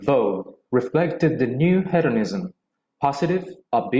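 Speech, with no audible technical faults anywhere in the clip.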